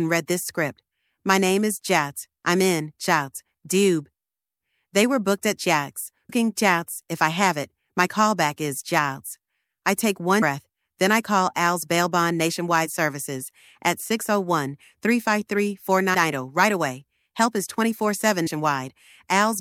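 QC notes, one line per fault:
6.29, 10.41, 16.13 and 18.46 s: compressed frames skipped. Runs of coded frames were lost or rejected by the decoder, so the audio jumps ahead by about 150 ms each time (about 300 ms at 10.41 s), which fits a frame of about 26 ms. Overlapping frames leave a short smeared blip at each join, not a click.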